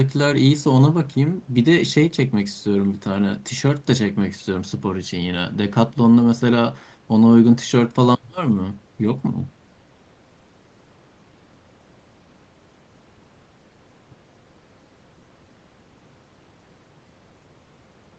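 No faults found: the speech carries the ordinary marks of a call path, with the microphone processing trimming the lowest bass and the codec leaving nothing above 8 kHz, both expected behaviour.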